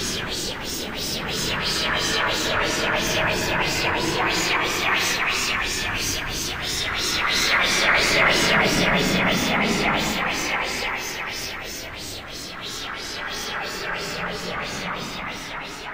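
The clip is a recording of sounds, and nothing is technically wrong with it.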